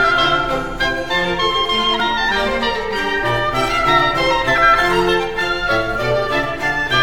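At 2.0 s and 4.58 s late-arriving music triggers a repeated buffer, replaying one 2.67 ms block: a click, hard waveform step, thin vertical spectrogram line.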